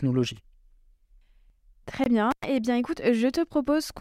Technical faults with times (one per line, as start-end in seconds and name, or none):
2.04-2.06 block of digital silence
2.31-2.44 intermittent contact